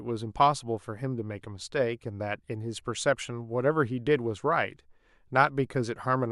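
Speech, with nothing technically wrong with it.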